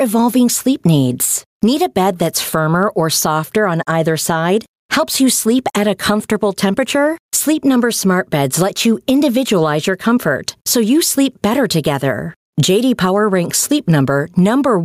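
Gain pumping runs throughout this speech clip: the gain swings by roughly 10 dB under each louder sound. This is likely a fast limiter or compressor clamping input gain set far too high, squashing the dynamics.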